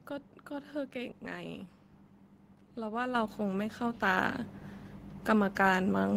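At 3.15 s the microphone volume steps up: the call software judged the input too quiet and raised the device's input gain in a single jump of about 7 dB rather than ramping it. Because the change is applied at the capture stage, the speech and the background noise floor rise together, instantly and in unison. There is no fade, just a sudden, persistent lift in loudness and room tone from that point onward.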